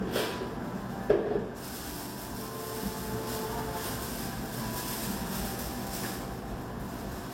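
Throughout the clip, low-bitrate audio was likely saved at a high bitrate: the remaining artefacts point to an early pass through a low-rate codec such as 32 kbit/s HE-AAC, later rewritten as MP3. Nothing remains above 16.3 kHz.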